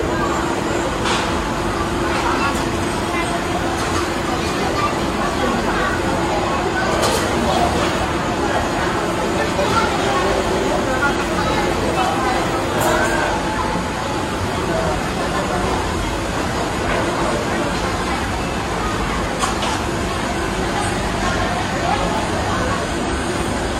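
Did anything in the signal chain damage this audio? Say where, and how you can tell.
Yes: frames out of order in network delivery swapped neighbouring blocks, garbling 2.54–2.85, 9.37–9.67, 10.99–11.20 and 23.07–23.37 s into flutter.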